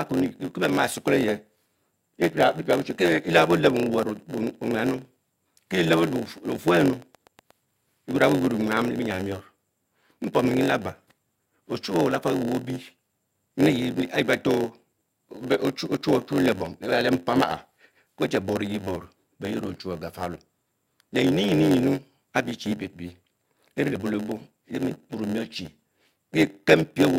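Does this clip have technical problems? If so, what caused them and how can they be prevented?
Yes. A block size mismatch (padded) runs through the whole speech clip. Each block is shorter than the next stage expects, and the remainder is zero-filled. This adds a buzz at 91.9 Hz. The speech plays at 0.919 times normal speed. To prevent it, make the writing and reading stages use the same block size.

A train of clicks runs from 6.02 to 7.52 s, ending just before "eyor a". It has about fifteen evenly spaced clicks at 8.79 per second, roughly as loud as the speech. The likely cause is interference from nearby equipment or a faulty connection. To prevent it, move the gear away from noise sources and check the interface connection.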